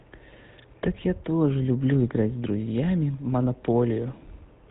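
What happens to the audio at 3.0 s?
At 3.0 s the speech sounds buzzy and gravelly, with nothing above 4 kHz. This is GSM full-rate codec damage running through the whole clip, fitting a 13 kbps coder that rebuilds the voice from a vocal-tract model driven by sparse, evenly spaced pulses.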